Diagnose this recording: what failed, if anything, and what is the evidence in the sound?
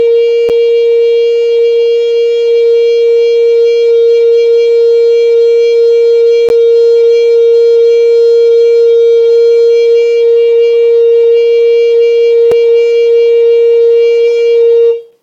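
At the playback stage, each 6-second stream segment's timestamps left a gap between stream segments, and the player padded it with silence. The music breaks off with hard edges at 0.49, 6.49 and 12.52 s, for 8, 12.8 and 3.6 ms; nothing is lost.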